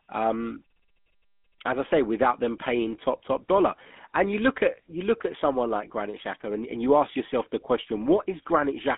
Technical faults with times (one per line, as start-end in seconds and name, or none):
0.00-8.97 GSM full-rate codec